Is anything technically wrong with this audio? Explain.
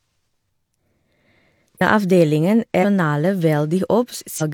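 Yes. Compressed frames are skipped at 1.77–1.82 s, 2.80–2.85 s and 4.37–4.42 s. Each time the decoder drops about ten 42.7 ms frames, jumping ahead nearly half a second. On a spectrogram it appears as an abrupt discontinuity.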